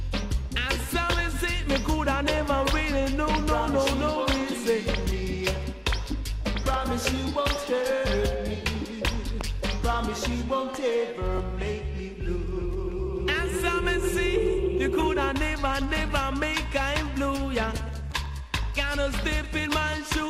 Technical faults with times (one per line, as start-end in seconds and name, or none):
0.00-20.29 MP2 compression